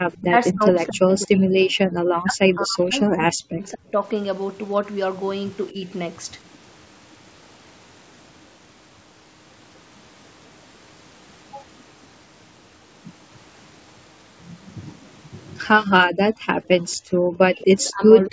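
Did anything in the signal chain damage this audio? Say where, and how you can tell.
Yes, and it's all in the call processing, specifically around the echo canceller. Right at the start, from 0.12 to 0.2 s, there's an echo leak: a faint, delayed copy of the sound trailing the original by about 0.23 s, sitting well below the main signal. That's most likely a far-end speakerphone whose echo canceller let a bit of its own loudspeaker pickup slip through, so it came back down the line.

The bigger problem is speech suppressed in double talk, and there are three spots. From 0.2 to 3.94 s the speech gets pushed down hard, nearly to silence at its worst, across about 3 s of that stretch. There's a brief, shallow dip from 5.71 to 5.85 s, and then another deep cut from 15.89 s to the end. The likely cause is the canceller losing track when both sides talked at once and ducking everything, including the real talker.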